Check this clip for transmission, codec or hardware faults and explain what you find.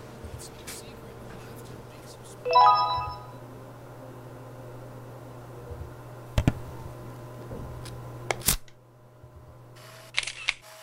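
Nothing stood out on listening that would point to a problem anywhere along the path this audio took.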